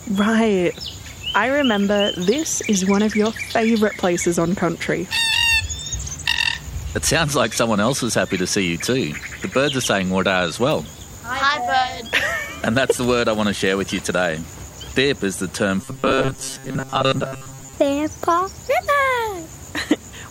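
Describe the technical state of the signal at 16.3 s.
At 16.3 s the sound has turned robotic, from repeated short buffers. This runs from 15.81 to 17.74 s. It is a rigid metallic buzz near 134 Hz. The likely cause is starved input, with most of the audio replaced by loops of about 7.5 ms.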